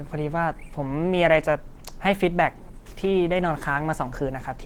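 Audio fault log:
Throughout, Opus compression: the encoder was likely starved of bits, in a way that fits a rate near 16 kbps, and dropped into its hybrid mode. That mode codes the lower band with a speech model and fills the upper band coarsely. The bandwidth stays wide, with content reaching about 20.1 kHz, but the speech comes out plainly damaged, sounding muffled and hoarse, with a rough, grainy texture where fine detail should be.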